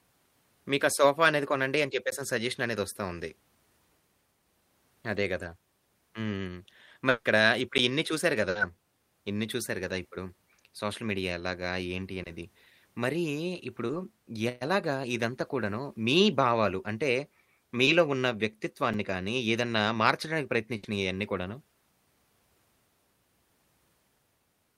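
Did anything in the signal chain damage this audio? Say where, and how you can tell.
Yes. Blocks of digital silence at 2.11, 7.78 and 18.94 s are heard as ticks or dips. These are abrupt silent gaps of 5 to 15 ms, pointing to buffer underruns in the driver or buffer stage.

From 7.09 to 7.27 s, the sound is held as a fading buzz or hiss for about 160 ms and then jumps ahead. This is likely a long network dropout.

Bursts of packet loss at 8.49 to 8.57 s and 20.77 to 20.85 s each become a 60 ms fading fill of the last sound, with the audio in between missing. The jitter buffer is concealing lost network packets.

Short concealed packet losses at 12.23 to 12.27, 13.87 to 13.91 and 17.85 to 17.89 s each smear about 20 ms of sound. The decoder is extrapolating over missing packets.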